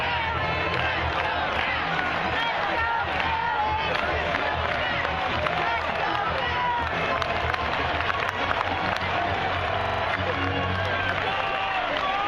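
At 4.86 s there is a brief blip of misplaced energy, a corrupt frame decoded: bits in one compressed frame were damaged, yet the decoder played it, so wrong gains put sound at the wrong frequencies for roughly one frame's length, peaking around -30 dBFS. A second, slightly louder squeak runs from 5.88 to 5.92 s, spanning about two frames and near -25 dBFS. Unlike a click or dropout, each burst carries out-of-place content rather than a sharp step.

From 9.81 to 10.03 s comes a system hang loop: the host stalled while the audio hardware kept replaying the same ring buffer, so one 42.67 ms slice repeats exactly five times, a stutter at 23.4 Hz that fits a 2048-sample buffer. Little or no audio goes missing afterwards. What separates this from a corrupt frame is that the repeats are identical copies of real sound rather than new garbled energy, and unlike an underrun there are no silent gaps.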